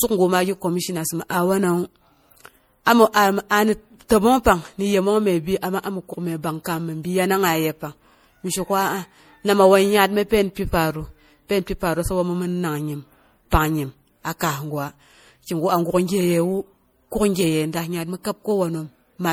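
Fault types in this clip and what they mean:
Generation loss: swirly, hollow, smeared speech with blurred attacks throughout, likely from about three rounds of MP3 re-encoding at what sounds like 64 kbit/s.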